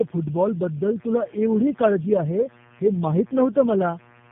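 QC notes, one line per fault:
Throughout: tandem speech coding. The speech passes through three low-rate speech codecs in a row, GSM full rate, AMR-NB at 7.4 kbit/s and finally G.729A at 8 kbit/s, with G.711 links in between. Each coder re-encodes the previous one's already degraded output, so the errors stack. The result is rougher, more muffled and more warbly than any single codec would give, with nothing above 3.4 kHz.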